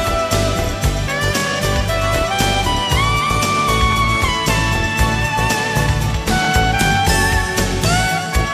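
At 1.40 to 1.42 s, 3.92 to 3.95 s and 6.45 to 6.47 s, overlapping chunks cause a brief stutter. Each 2.5 s block begins about 23 ms before the previous one finished, so that sliver plays twice. Unlike a dropout, nothing goes missing; the sound repeats, evenly spaced.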